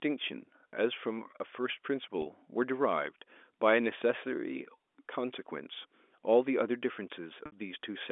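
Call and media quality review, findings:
Packet loss with pitch repetition, 2.22 s (40 ms) and 7.46 s (60 ms): brief buzzy held tone at 2.22 s, fade into silence at 7.46 s, as jitter-buffer concealment loops the last pitch period.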